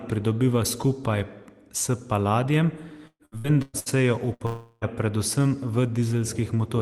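From 3.07 to 3.89 s, right after "pridobiva skupaj s paladijem", repeated packet loss (robotic sound) hits the speech. Five separate gaps, the longest 121 ms, were patched by extending the preceding sound, so about half of that stretch is concealment. The speech turns choppy, with fragments missing.

At 4.34 to 4.43 s, a burst of packet loss removes about 60 ms. The receiver stretches the last sound and lets it sag, so a brief held buzz or fading hiss stands in for that gap before the speech jumps ahead.

Almost immediately after, from 4.46 to 4.85 s, about 360 ms of speech is replaced by a sustained, decaying continuation of the previous sound. It never drops to silence before the speech resumes further on. This points to a long network dropout as the likely cause. Across the clip, the call codec's band limit near 12 kHz dulls the top end, as expected for Opus at a rate that fits 24 kbps.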